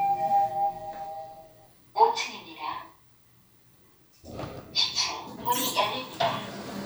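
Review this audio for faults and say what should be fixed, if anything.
No faults can be heard anywhere in this recording of sounds. Nothing needs to be fixed.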